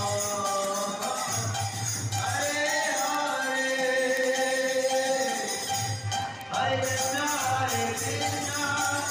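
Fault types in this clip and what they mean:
word clock ticks: a receiver on its own unlocked clock slips one sample about every 0.07 s, giving steady sharp ticks from 0.13 to 9.04 s, unlike random crackle.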